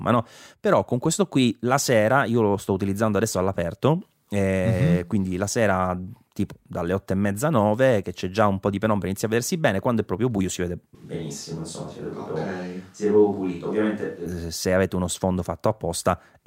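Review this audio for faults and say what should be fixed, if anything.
Switch to a distant microphone, 10.95 to 14.26 s: the speech suddenly turns roomy and hollow with thinner bass, then snaps back. The level stays about the same, but room noise rises to roughly 35 dB below the speech, likely because the close microphone dropped out and a farther one filled in. Monitor the close microphone's feed during recording and keep a backup lavalier running, so a dropout never forces the distant pickup into the edit.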